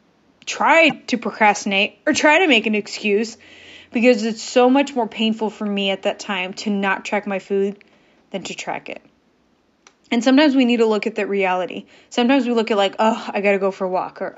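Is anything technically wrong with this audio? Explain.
Yes. There is damaged data in the compressed stream. From 0.88 to 0.92 s, just before "to procrastinate or try", the speech breaks into a brief glitch. Part of the compressed data there was corrupted, so the decoder could not read those frames correctly, lost its place in the stream and jumped ahead to the next valid frame header. The faint room noise, about 42 dB below the speech, belongs to the recording itself.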